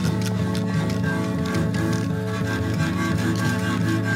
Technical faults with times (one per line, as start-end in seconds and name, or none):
0.06-0.85 train of clicks